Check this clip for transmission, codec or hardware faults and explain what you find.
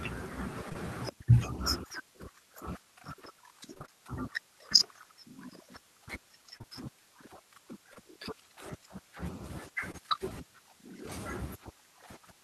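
Packet loss on the transmission path, concealed by the receiver, affects the speech in two forms.

Short concealed packet loss at 0.69–0.77 s, 6.58–6.66 s, 7.94 s and 9.92 s. Each hole of about 20 ms was filled by extending the preceding sound, leaving brief smears or wobbles.

Repeated packet loss (robotic sound) from 3.74 to 3.90 s. Four successive gaps, the longest 24 ms, leave nearly half the span synthesized, giving a choppy stutter.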